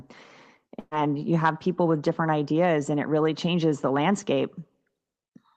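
A burst of packet loss hits from 0.79 to 0.94 s: about 120 ms of audio never arrived in time, so the receiver stretched the last sound it had for roughly 120 ms, fading it, then left about 20 ms of silence before resuming at "you have people with".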